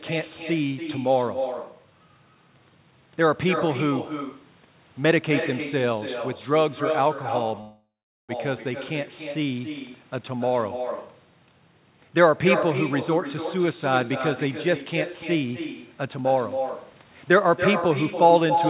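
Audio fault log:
Throughout, echo with no canceller: every phrase is shadowed by a fainter, thinner copy about a third of a second later, at about 8 dB below the speech, as the far-end loudspeaker feeds back into its microphone. A spectrogram shows each syllable's pattern repeated, weaker, slightly later.
7.61 to 8.32 s, call audio freeze: the sound stretches into a fading buzz or hiss, then about 0.42 s of silence, before resuming where it stopped, likely from delayed packets emptying the jitter buffer. Nothing is lost, but 0.68 s of gap is inserted; the waveform shows a decaying tail then flatline.
15.35 to 17.05 s, jitter buffer speed-up: the audio runs about 7% faster at unchanged pitch, sounding slightly hurried, as short pitch-period pieces totalling roughly 150 ms are cut to reduce backlog. A spectrogram keeps harmonic spacing while syllables sit closer together, with tiny splice seams.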